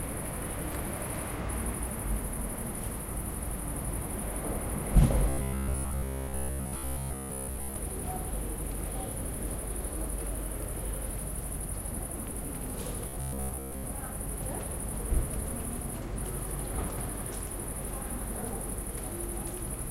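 From 5.29 to 7.76 s, and again from 13.09 to 13.85 s, the sound goes robotic from repeated short buffers: a rigid metallic buzz at about 67 Hz. That's likely a roughly 15 ms chunk looped while new audio lagged, with most of the real sound skipped.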